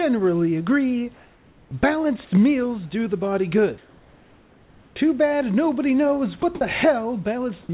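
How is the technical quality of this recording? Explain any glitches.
The recording has a few voice-detector glitches on top of a narrowband call sound, with nothing above 4 kHz, which fits a G.711 A-law call path.

Comfort noise in place of the background shows up from 1.15 to 1.71 s and again from 3.78 to 4.96 s. The real room hiss turns into a flat, featureless noise, about 3 dB and then about 2 dB quieter. That's likely the sender pausing transmission in the gaps while the receiver fills in synthetic noise.

There's an onset clipped by the voice detector from 1.69 to 1.71 s. The returning speech lands abruptly, missing its first 20 ms or so. The likely cause is a detector that was slow to notice speech restarting, so the receiver was still playing comfort noise when it began.

Sound dropped by the voice detector happens twice, briefly at 6.42 s and then from 6.55 to 6.61 s. Short slices of speech (10 ms and 60 ms) give way to steady noise. 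The detector likely mistook the sound for background and briefly stopped sending.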